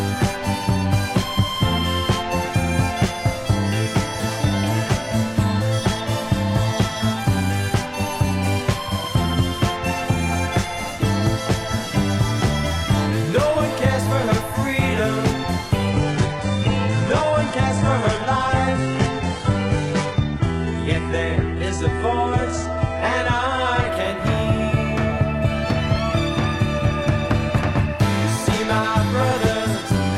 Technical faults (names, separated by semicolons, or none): adaptive stream at a lower bitrate